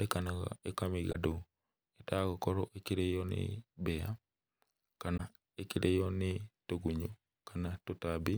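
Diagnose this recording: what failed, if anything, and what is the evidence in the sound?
Damaged data in the compressed speech stream, a codec-stage fault: short glitches at 1.09–1.16 s and 5.14–5.20 s, the second just before "ĩkĩrĩo nĩ". The decoder misreads corrupt frames until it resyncs, leaving brief broadband smears or blocky spectral bursts on a spectrogram.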